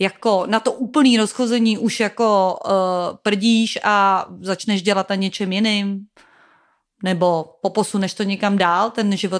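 Speech runs through the whole recording with no audible technical faults in the signal.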